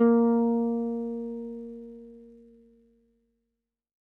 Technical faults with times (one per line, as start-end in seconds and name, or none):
none